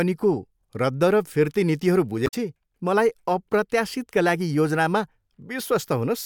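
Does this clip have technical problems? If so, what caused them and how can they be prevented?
Yes. From 2.24 to 2.34 s the speech breaks up briefly, caused by damaged data in a compressed stream. Some bytes in that stretch were lost or overwritten, so the decoder misread the frames, lost sync and had to hunt for the next valid frame header. On a spectrogram and waveform this shows as an abrupt break in the speech at that point. Checksummed transfer and error-protected storage would prevent it.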